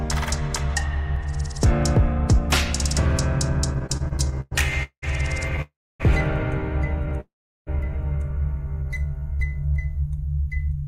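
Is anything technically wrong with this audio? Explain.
Yes, there are several delivery problems here. From 3.73 to 5.04 s there are repeated stalls, a stutter: eleven short gaps where packets kept arriving late, the jitter buffer ran dry, and the receiver stretched the last sound to cover. The longest hold is about 192 ms, and together they fill roughly a third of that stretch, so the sound drags and hiccups without losing anything.

Then there are two call audio freezes, at 5.62 to 6.02 s and at 7.20 to 7.69 s. The sound holds, buzzes or hisses, and fades to silence for about 270 ms and then 380 ms before picking up where it left off. The likely cause is packets held up in transit and the buffer emptying, which leaves a gap of about 0.38 s and then 0.46 s.

From 8.83 to 9.73 s there's a jitter buffer slow-down. The receiver rebuilt its reserve by repeating tiny pitch-period slices, adding about 115 ms. 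The sound plays at about 88% speed with the pitch unchanged, so it comes across drawn out.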